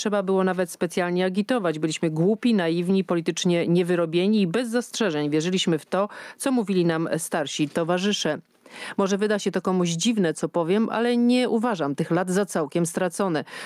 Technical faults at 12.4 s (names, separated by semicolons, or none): gain pumping